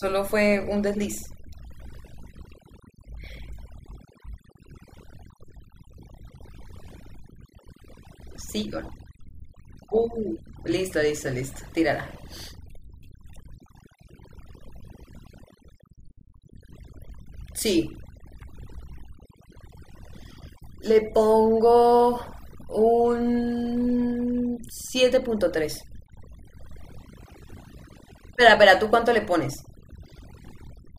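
Overdone noise removal runs through the entire speech recording, start to finish. A noise reduction stage was set far too aggressively: whenever an individual frequency band sits close to the level it treats as noise, it pulls that band down hard or mutes it, and the softer parts of the voice are stripped away along with the noise. The gaps between phrases collapse to near silence speckled with twinkling artefacts.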